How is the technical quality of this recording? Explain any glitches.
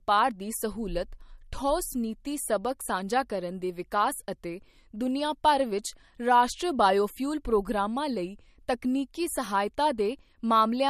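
The technical quality is limited by one fault that runs the whole length of the speech: low-bitrate audio saved at a high bitrate. Nothing is present above 13.9 kHz, and a spectrogram shows a flat, hard ceiling there. The likely cause is a file first encoded as MP3 at a low rate, about 48 kbit/s judging by the artefacts, then re-encoded at 192 kbit/s. The larger file can't restore the discarded detail, so the speech keeps its dull top and smeary compression texture.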